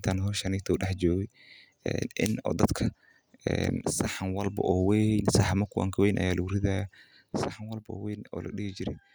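At 3.81 s the speech and its background noise drop together by about 5 dB, recovering at 4.46 s; at 7.34 s both fall about 8 dB and stay down to the end. These sudden gain jumps likely come from digital gain being switched without a ramp.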